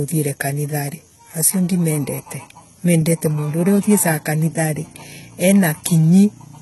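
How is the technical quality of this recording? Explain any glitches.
The recording is heavily degraded by low-bitrate compression throughout the speech. Throughout, the system likely applied HE-AAC compression, rebuilding treble from copied lower bands. The s sounds turn gritty and metallic, nothing reaches above 11.8 kHz, and the heavy damage fits about 16 kbps.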